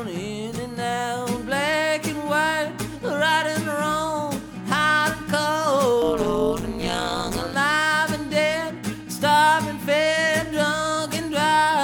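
Overlap-add ripple runs from 6.02 to 7.54 s. Frames were windowed and rejoined with an overlap that fails to sum to constant gain, so the level dips by about 60 dB roughly 150 times a second. The result is a harsh, robotic buzz-like tremolo.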